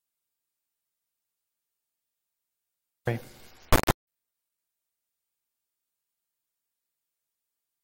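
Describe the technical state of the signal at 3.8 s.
At 3.8 s the audio is a harsh, extremely loud buzz that slams between silence and hard clipping, like a distorted square wave, lasting from 3.72 to 4.07 s. This is an integer read as float fault: raw integer sample words are being decoded as floating-point values, which fits 32-bit integer data read as 32-bit float. The resulting numbers are either vanishingly small or wildly beyond full scale, so the output snaps between zero and the clipping ceiling.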